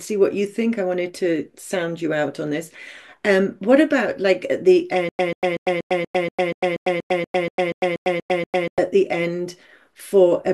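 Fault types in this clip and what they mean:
Stutter with silent gaps: A 139 ms burst repeats every 239 ms from 5.09 to 8.78 s, with 100 ms of silence between. A stalled stream likely caused it.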